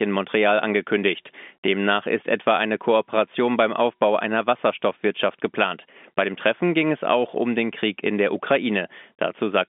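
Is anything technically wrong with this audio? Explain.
No, this speech sits on an ordinary telephone line, with the sound confined to roughly 200 Hz to 3.6 kHz as expected of G.711 mu-law coding at what fits a 64 kbps channel, and nothing in the signal points to a technical problem.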